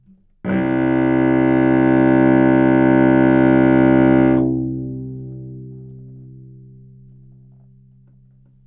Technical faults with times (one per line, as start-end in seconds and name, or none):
none